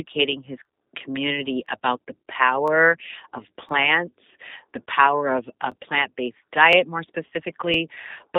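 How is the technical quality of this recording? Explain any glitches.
The recording is speech with limited technical quality: narrowband, coded-sounding audio and a regular stutter.

Throughout, a G.729 codec at 8 kbit/s passes only about 250 Hz to 3.7 kHz and rebuilds the speech from a simple model, leaving it slightly rough and synthetic.

Overlapping chunks cause brief stutters at 0.65, 1.66 (between "his community" and "about the"), 2.68, 3.69, 4.70, 5.72 (between "the power of a" and "plant based"), 6.73 and 7.74 s. The audio was handled in 1-second chunks, and each one began before the previous ended, so about 13 ms replays at every join.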